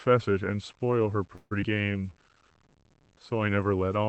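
From start to finish the speech carries a grainy, rough texture that rises and falls with the speech itself. That is the mark of low bit depth without dither: the samples were rounded to a coarse grid, which fits an 8-bit signal, leaving error roughly 35 dB below the speech. Unlike steady hiss, this noise tracks the signal and fades with it. Quiet tails sound gritty rather than sitting on a constant floor. The cause is likely that reduced word length, heard through the Opus call path's 8 kHz bandwidth.

From 1.35 to 1.53 s comes a call audio freeze. The last sound is stretched into a fading buzz for 155 ms instead of moving on. The likely cause is delayed packets starving the jitter buffer. When the audio resumes, it picks up exactly where it stopped, so nothing is lost and the speech is simply 155 ms later. That separates it from a dropout, where the following audio would be missing, and from a skip, where the timeline jumps.

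Between 1.61 and 1.64 s the audio does the opposite: a skip ahead. About 70 ms of speech is discarded, and the two sides are stitched together through a join only 12 ms long. The result is an abrupt lurch forward rather than any audible gap. This claws back part of the delay the freeze had just added.

From 1.75 to 2.11 s a jitter buffer slow-down follows. Repeated pitch periods add 62 ms, so the speech runs at about 85% speed while its pitch stays the same. Sounds in this stretch are drawn out. A tape-style slow-down would lower the pitch, and a freeze would hold one sound as a buzz, so this one is distinct from both.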